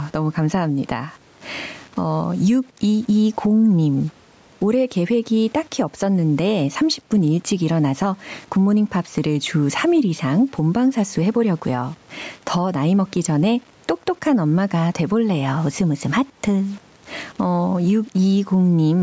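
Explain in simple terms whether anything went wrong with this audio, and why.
Two things went wrong, and both run through the whole clip.

First, low bit depth without dither: the speech sounds grainy and gritty, especially the quiet parts. It was likely rounded down to something like 8-bit audio with no dither to smooth it.

Second, gain pumping: loud and soft parts end up closer in level, so everything feels squashed. This is likely from the mic gain being set too high, with a fast limiter yanking it back down.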